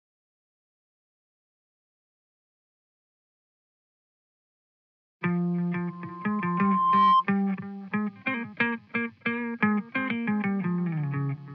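Loudspeaker feedback squeal, 5.88 to 7.25 s: a 1 kHz tone swells over about a second to roughly 10 dB above the audio, as the microphone–loudspeaker loop exceeds unity gain.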